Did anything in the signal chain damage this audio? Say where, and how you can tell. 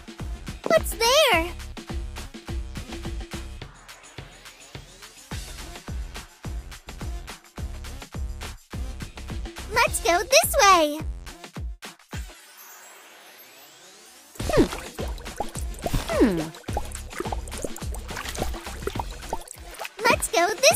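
Yes: overlapping chunks in buffering. Stutters at 2.43, 8.45, 14.47 and 20.49 s, every 6 s, replay 23 ms because each chunk starts early.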